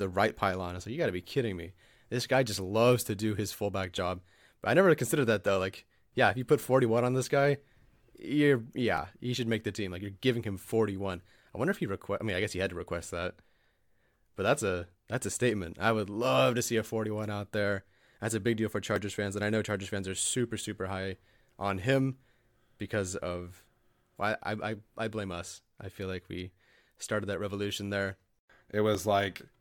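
Audio missing between chunks occurs at 8.98 s, just before "he should make the", at 18.96 s, between "a big deal for" and "fans and I know", and at 28.95 s. Each is a tiny skip where a few milliseconds of speech vanish and the two sides butt together with no gap. The roughly 10-second spacing, a multiple of 5 seconds, likely comes from a recorder losing a sliver each time it closes one chunk and opens the next.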